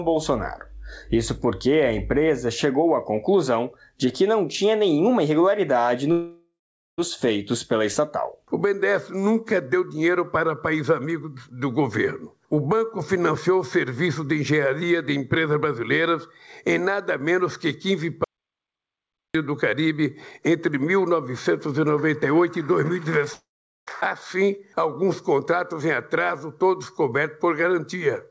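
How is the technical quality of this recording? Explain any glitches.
The recording has three breaks where audio is lost. The call path limits the sound to nothing above 8 kHz, which points to G.722 at about 64 kbps.

Long network dropout, 6.12 to 7.00 s and 23.34 to 23.89 s: the stream was likely interrupted, so the receiver had no packets to play and stretched the last sound to cover the hole. You hear a fading buzz that gives way to silence for about 0.46 s in the first gap and 0.43 s in the second. The audio then resumes further on, and roughly 0.86 s and 0.54 s of material are gone.

Audio dropout to silence, 18.24 to 19.35 s: the input was likely cut off at the source, such as a dropped connection or an accidental mute, while recording carried on writing silence. The sound stops abruptly and leaves about 1.1 s of total silence with no background noise at all, then cuts straight back in partway through. 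Whatever happened during that stretch is lost.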